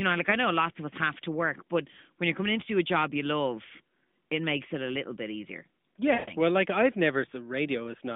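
From 6.14 to 6.34 s, lost AMR speech frames: the decoder stretches the last good sound out over about 140 ms, fading it toward silence before the speech returns weak.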